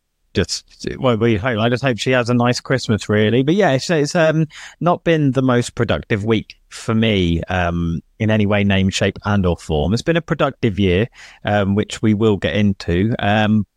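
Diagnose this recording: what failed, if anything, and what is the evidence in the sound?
Nothing in this speech recording points to a failure at any stage of the chain. There is no audible evidence to tie to a time or a mechanism, so no diagnosis follows.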